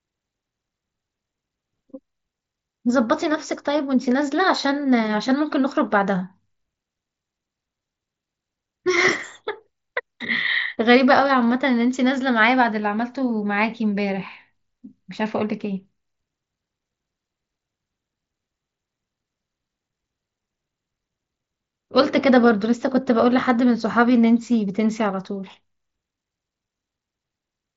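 Nothing in this speech goes wrong anywhere along the way; it simply carries the sound of a Bluetooth mSBC headset link, with the top end stopping at around 7.7 kHz and just a light touch of that codec's usual grain.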